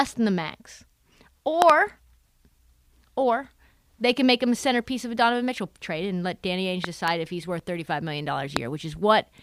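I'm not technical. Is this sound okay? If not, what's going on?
No. There are three loud pops. A quick double pop hits at 1.62 to 1.72 seconds, another from 6.84 to 7.10 seconds, just before "if he's worth", and a single one at 8.57 seconds. Each jumps far above the speech, which carries on underneath. They are likely sudden electrical jolts from a plug, a switch or static.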